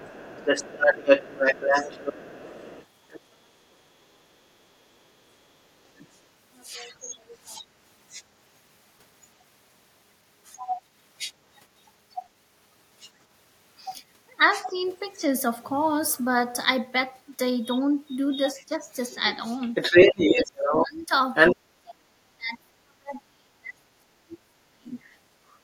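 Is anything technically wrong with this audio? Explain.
Yes. There are two faults. Other side's voice leaking through occurs at 0.0–3.75 s, 5.84–8.24 s, 9.39–9.44 s, 10.44–15.17 s and 17.63–21.56 s. A second voice sits under the talker, faint at times and louder than the talker in the first and last stretches. The likely cause is loudspeaker echo that the echo canceller failed to remove.

Speech suppressed in double talk occurs at 14.66–14.73 s, 18.52–18.75 s and 19.99–24.99 s. While both sides talk, the talker's level drops: slightly at first, then by roughly 20 dB, then by about 35 dB over the final stretch. The canceller likely turned both voices down together.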